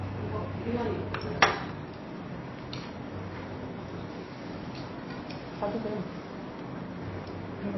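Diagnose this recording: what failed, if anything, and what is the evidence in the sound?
MP3 compression is audible for the whole clip, a codec-stage failure. Nothing survives above 5.8 kHz, and the remaining sound is watery, with weak spectral detail flickering between frames. The encoder was likely starved of bits, consistent with roughly 24 kbps.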